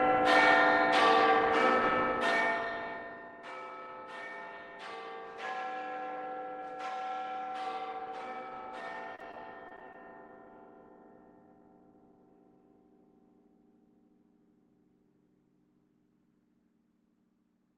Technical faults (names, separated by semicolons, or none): repeated packet loss (robotic sound)